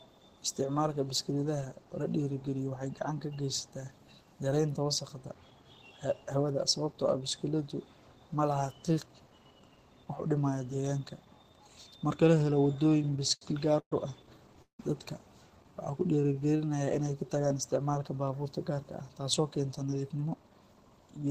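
This is speech with a run of network-timing faults packed into the back half. From 12.72 to 13.42 s there are repeated stalls (stutter): about ten short holds, the longest 73 ms, where the receiver's jitter buffer kept running dry and it stretched out the last bit of sound while waiting. That adds up to 162 ms of filled-in audio, close to a quarter of that span. Nothing is actually lost, but it drags and hiccups. Right after come two call audio freezes, likely from packets held up in transit emptying the buffer. The first, 13.79 to 13.93 s, sits just before "u ah dadka". The last sound buzzes on and fades, with about 80 ms of near-silence in a 123 ms gap. The second, 14.62 to 14.80 s, follows "u ah" and runs 169 ms, about 110 ms of it silent. Each time the audio picks up where it left off, so these are inserted gaps rather than dropouts. Then there's a jitter buffer slow-down from 15.50 to 16.77 s, between "u ah dadka" and "inay ka tagaan isticmaalka". 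The receiver rebuilt its reserve by repeating single pitch periods, so the speech plays at about 87% speed with the pitch unchanged, adding 175 ms and sounding drawn out. Finally, from 18.68 s to the end, a jitter buffer speed-up trims tiny pitch-period chunks to shed extra buffered delay. Playback runs at about 110% and feels a bit rushed, losing roughly a third of a second overall.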